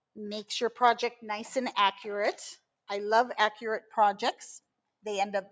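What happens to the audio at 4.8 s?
Nothing goes wrong at 4.8 s; the audio runs on intact through that moment, with only the call microphone processing's normal trimming of the lowest bass and its ceiling at 8 kHz.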